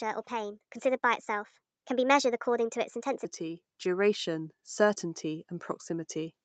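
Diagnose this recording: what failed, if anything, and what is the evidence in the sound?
From 3.37 s to 5.57 s the speech and the background noise behind it swell up together, slowly, by about 3 dB over those two seconds. That is automatic gain rising in the call processing stage. The automatic gain control judged the input too quiet and raised its gain gradually, lifting the voice and the room floor alike. The top end stops near 8 kHz, which fits an Opus call codec running wideband.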